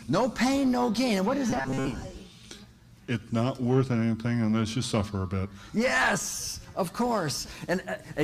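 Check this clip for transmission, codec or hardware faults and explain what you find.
One fault is present. Robotic sound from repeated short buffers runs from 1.50 to 1.87 s. A steady buzz at 134 Hz sits on the audio there, as if it were locked to a fixed pitch. The likely cause is that fresh audio arrived too slowly, so playback kept looping a fragment of about 7.5 ms while the real signal was dropped. Most of that stretch is repeated material, giving a harsh, metallic drone that only loosely tracks the original.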